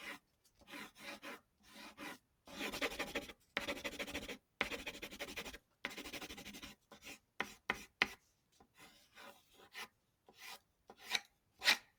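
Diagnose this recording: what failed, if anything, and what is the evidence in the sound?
The failure is in call processing. A noise suppressor built for speech was left running on sounds, not speech. It reads steady tones, ambience and decaying tails as noise and pulls them down. Across the clip the level swings by about 10 dB as the suppressor clamps and releases. Sudden onsets pass, while sustained parts sink. The result is an audible pumping and thinning of the sound.

Specific passages show the sound cut by the noise suppressor. Dips occur at 0.19 to 0.65 s, 1.4 to 2.47 s, 3.35 to 3.56 s, 4.39 to 4.6 s and 5.59 to 5.84 s. The drops reach about 10 dB, and about 9 dB at 3.35 s. From 6.75 s to the end the suppression recurs for about 3 s in total, fading the held material. Each time, steady content is treated as noise and attenuated, so it sinks in level.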